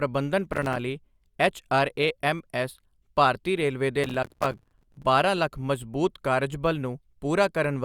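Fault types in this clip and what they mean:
Processor overload crackle: the processor misses deadlines on small audio buffers, and each miss leaves a hard-edged gap of silence, which fits buffers of about 5 ms. Here the speech crackles from 0.50 to 0.76 s, then tears for a full second after "ਐੱਚਆਰਏਐੱਮਐੱਸ ਭਾਰਤੀ ਰੇਲਵੇ ਦੇ".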